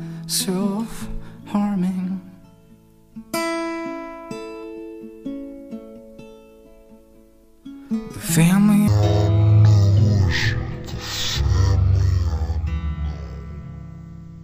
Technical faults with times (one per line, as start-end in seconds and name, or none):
8.88-14.44 stereo read as mono